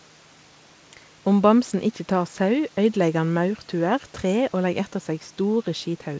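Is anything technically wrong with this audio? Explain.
No, nothing technically wrong can be heard here.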